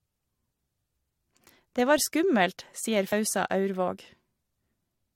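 At 3.11 s the speech is hit by damaged data in a compressed stream. It lasts only about 12 ms. Part of the encoded stream is corrupted at that point. The decoder cannot read those frames properly. It loses its place and hunts for the next valid frame header before resuming. The result is a tiny, sharp blip cutting into the speech.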